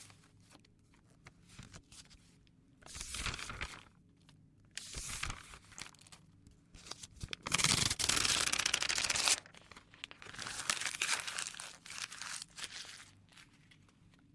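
Sound recording; no technical faults to report.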